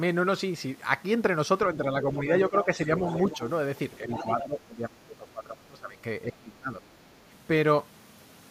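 From 2.49 to 3.04 s the speech dips by about 10 dB. This is speech suppressed in double talk. The echo canceller likely mistook the talker for loudspeaker echo while both sides spoke. From 2.99 to 3.37 s the other side's voice leaks through, about 15 dB below the speech. The canceller likely left residual echo in the microphone signal. Another short dip follows at 3.29 to 3.43 s. From 4.01 to 5.98 s the speech drops by up to about 20 dB. A leak comes through at 4.11 to 4.25 s, about 10 dB down. A last drop of about 20 dB runs from 6.25 to 6.83 s.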